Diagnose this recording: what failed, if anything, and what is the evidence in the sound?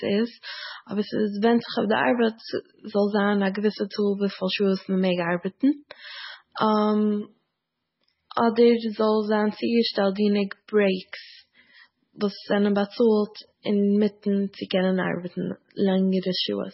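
The codec stage is where this went wrong, and it's with you the whole way through the speech. Nothing gets above about 5.6 kHz, so the sibilants are dull and clipped, and what remains has that watery, swirly texture with chirpy s sounds and soft, smeared onsets. That's likely heavy MP3 compression, somewhere around 16 kbps: the encoder chops the treble at a fixed cut-off and keeps dropping weak frequency lines from one frame to the next.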